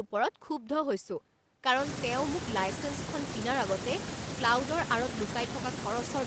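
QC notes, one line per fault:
No faults found in this speech. The call path can be heard in the top end, where nothing reaches above 8 kHz, which fits Opus coding at about 24 kbps with an 8 kHz bandwidth.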